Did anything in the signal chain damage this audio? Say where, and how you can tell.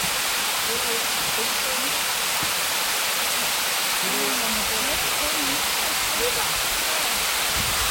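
Yes, at the codec stage: throughout, the sound has a cut-off top with nothing above 16.6 kHz, plus two layers of codec artefacts heard together. This is likely transcoding between lossy codecs, with the result fitting a low-bitrate MP3 re-encoded to Vorbis at a similar rate.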